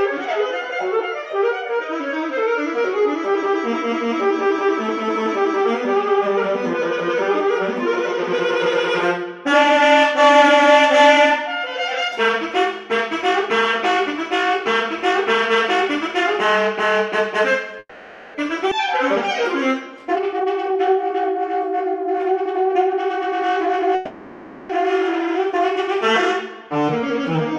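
The audio has two call audio freezes, a skip ahead and two stretches of jitter buffer speed-up. From 17.79 to 18.36 s and again from 23.95 to 24.71 s the sound stalls. The last moment is held as a fading buzz for about 550 ms in the first case, ending in roughly 40 ms of near-silence, and for about 740 ms in the second. This is likely from delayed packets draining the jitter buffer. Nothing is lost, and the sound resumes where it stopped. On a spectrogram each freeze appears as smeared, repeating horizontal bands that decay. The waveform shows a periodic envelope that shrinks before normal detail returns. At 18.70 to 18.73 s the audio skips ahead. Around 200 ms is dropped and the two sides are spliced with only a 10 ms join, so the playback jumps forward abruptly. This shows as a sudden discontinuity in the waveform and a hard vertical seam in the spectrogram where harmonic tracks change without transition. 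The jitter buffer speed-up runs from 20.05 to 23.92 s at 109% speed, shedding about 300 ms. It happens again from 26.68 to 27.46 s at 106%, trimming roughly 50 ms. Short pitch-period chunks are cut repeatedly to reduce the accumulated delay, so the sound feels hurried while pitch stays put. A spectrogram shows compressed timing with unchanged harmonic spacing.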